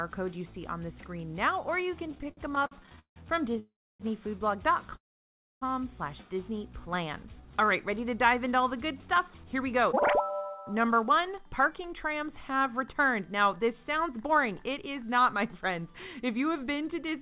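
From 2.06 to 3.59 s the sound drags and stutters through repeated stalls (stutter). Late packets emptied the jitter buffer 22 times, and the gaps were bridged with continued sound, the longest 167 ms. Call audio freezes follow at 3.59 to 4.02 s (0.40 s) and 4.95 to 5.63 s (0.66 s). The last sound trails off, then goes silent for most of each gap before resuming where it stopped. Packets were likely held up in transit. A jitter buffer slow-down runs from 6.90 to 7.66 s. Repeated pitch periods stretch the sound to 93% speed at unchanged pitch, adding 61 ms. From 9.02 to 17.13 s a jitter buffer speed-up trims short pieces to shed excess delay, running at 106% speed and removing about half a second, so the sound feels hurried. Throughout, the G.711 call path leaves nothing above 4 kHz.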